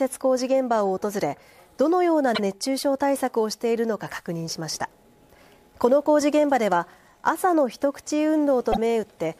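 The audio stutters twice because of repeated frames. At 2.34 s a 52 ms block plays again, which fits two compressed frames being sent twice. At 8.71 s a 26 ms block repeats. Each repeat lengthens the audio by its own duration.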